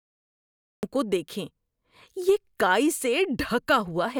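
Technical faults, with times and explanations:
0.00 to 0.83 s, cut-off start: the first 0.83 s is pure digital silence, and the speech then begins abruptly mid-sound at 0.83 s, with no natural onset, breath or fade-in leading into it. What should be the gradual attack of the opening sound is missing, so the speech appears to jump in already under way. This happens when recording or streaming begins late, after the talker has started, leaving an empty stretch before the capture actually picked up.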